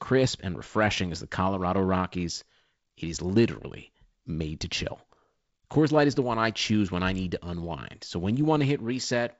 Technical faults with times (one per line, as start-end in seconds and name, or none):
none